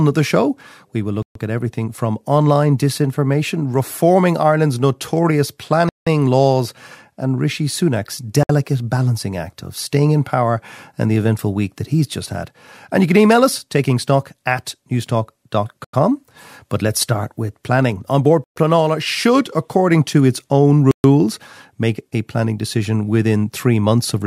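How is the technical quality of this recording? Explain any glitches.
The speech is broken by six short dropouts to silence, each a Bluetooth stall. They fall at 1.22 s, after "the show we will", then at 5.89 s, 8.43 s, 15.84 s, 18.44 s and 20.91 s. Each lasts 0.06 to 0.18 s. The likely cause is radio interference delaying packets, which starved the headphone buffer. Playback then picks up where it stopped or slightly later.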